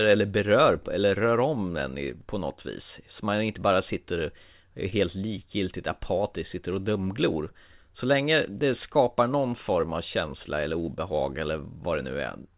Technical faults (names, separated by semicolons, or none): short concealed packet loss